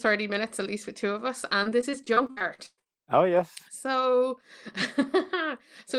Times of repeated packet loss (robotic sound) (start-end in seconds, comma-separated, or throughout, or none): 1.63-2.87